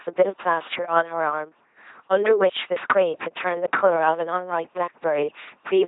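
Speech heard through an LPC-10 vocoder throughout, heavily damaged: a buzzing, mechanical robot voice, with nothing above 3.8 kHz, pointing to about 2.4 kbit/s. Unlike a waveform codec, every stretch is either pulse-driven buzz or pure noise, so wrong voicing decisions produce sudden buzz or hiss.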